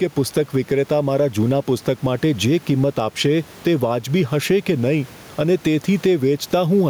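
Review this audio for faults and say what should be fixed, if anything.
Gain pumping runs throughout the speech: the gain swings by around 10 dB, and the room noise sits about 32 dB below the speech. The likely cause is gain set far too high, with a fast limiter pulling it down. Unlike a noise gate, which cuts the background, this pulls the gain down on loud sounds. To prevent it, lower the microphone gain so the limiter rarely acts.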